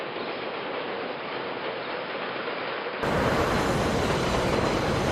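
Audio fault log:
0.00–3.03 s, input switched to a poorer device: The opening is dull and boxy, with nothing above 5.2 kHz. It sits roughly 10 dB lower, over faint new noise. At 3.03 s it clears abruptly, without a gap. A device change is the likely cause.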